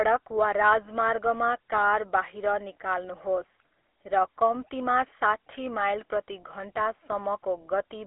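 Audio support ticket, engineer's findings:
GSM full-rate codec throughout: buzzy, gravelly speech from coarse pulse excitation, fits 13 kbps. Spectrogram: telephone band 300 Hz–3.4 kHz, hard ceiling with nothing above 3.8 kHz, smeared harmonics.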